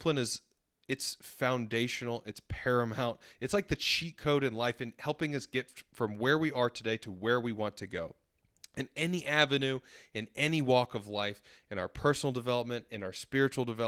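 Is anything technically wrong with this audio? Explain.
No, nothing technically wrong stood out on listening to this speech recording.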